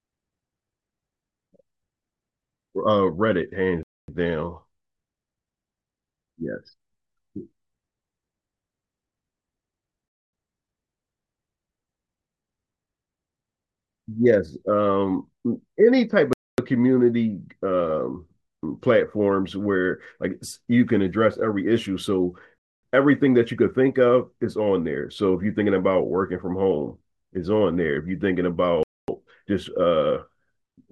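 Hard-edged holes of silence, each 250 ms long, cut into the speech at 3.83, 10.08, 16.33, 22.58 and 28.83 s. This is a gap between chunks: the audio arrives in 6-second blocks, and silence is inserted at each join without losing any sound.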